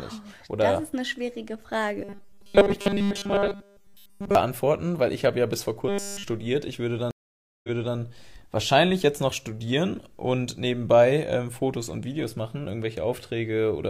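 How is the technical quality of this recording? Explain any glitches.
The recording has three glitches: two stretches of robotic buzzing and one stream dropout.

From 2.04 to 4.35 s, just after "das ist eine schwierige", and again from 5.89 to 6.24 s, after "habe ja bis vor", there is robotic sound from repeated short buffers. New audio likely arrived too slowly, so playback looped a tiny slice of roughly 5 ms in place of essentially all the real speech. That loop imposes a fixed 200 Hz metallic buzz over the voice.

From 7.11 to 7.96 s there is a stream reconnect. The connection dropped, giving about 0.53 s of silence. A fresh decoder then picked up the stream 325 ms earlier than where it cut off, so a short stretch repeats before "wahrscheinlich jetzt noch studieren".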